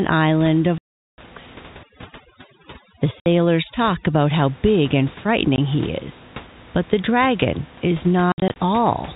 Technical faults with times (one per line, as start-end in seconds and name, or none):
0.78-1.18 packet loss filled with silence
1.83-4.15 overdone noise removal
3.20-3.26 packet loss filled with silence
5.56-5.58 packet loss filled with silence
8.32-8.56 packet loss filled with silence